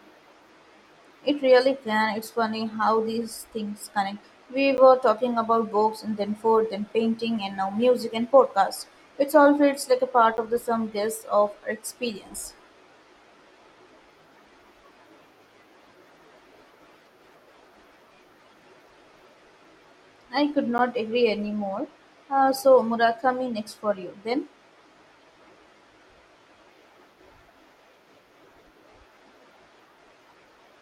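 Blocks of digital silence, each 10 ms long, break this speech clip at 4.77 s, just before "were talking about books", at 10.37 s, just before "of the sum guess", and at 20.78 s, between "I could" and "agree anymore". At each one the signal drops straight to silence and returns with no fade, and at this length each is heard as a brief tick rather than a gap. Silence in identical 10 ms blocks points to an output buffer that was not filled in time.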